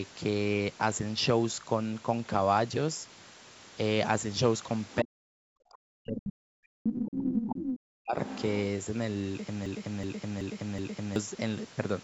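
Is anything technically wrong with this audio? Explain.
Yes. Around 4.91 s, the other side's voice is leaking through: a loudspeaker's playback likely reached the microphone without the echo canceller removing it. That second voice surfaces as brief scraps at 4.91, 6.17, 6.88, 7.4 and 8.26 s. It starts far below the talker at about 30 dB down, and by 6.88 s it is about as loud as the talker.

From 5.01 to 8.19 s the talker's speech is suppressed in double talk. With both sides speaking, the canceller likely couldn't tell its own talker from the echo and turned everything down. The voice dips and cuts out in pieces over about three seconds, by as much as about 40 dB.

From 9.66 to 11.16 s there is a broken-record loop. The stream likely stalled and kept resending its last buffered fragment, so a 0.38 s piece plays four times back to back, and the audio meant for that span is lost.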